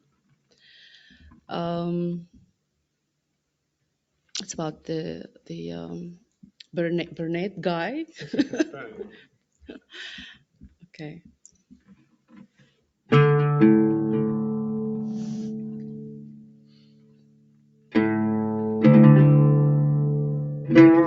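A speech-oriented noise suppressor applied to music or sounds stays active throughout, treating sustained tones and decays as noise and pulling them down by about 15 dB relative to attacks, so the material pumps and thins between transients. The worst sound cut by the noise suppressor falls at 0.01–0.67 s (down about 18 dB), 1.13–1.49 s (about 9 dB), 10.34–10.97 s (about 14 dB), 11.71–12.33 s (about 15 dB) and 16.1–17.95 s (about 19 dB). In the last and longest stretch, roughly two seconds of held sound collapses, while the shorter events clip decaying tails. Above all this, content stops near 8 kHz, which fits an Opus call path.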